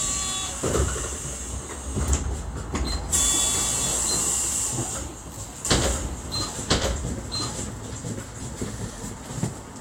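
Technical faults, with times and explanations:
5.65 to 8.91 s, doubled audio track: a second full-band copy trails about a second behind at roughly equal level, likely from a second capture path or a misaligned edit. Unlike echo or reverb, it never decays, adds no room colour, and cuts in and out abruptly.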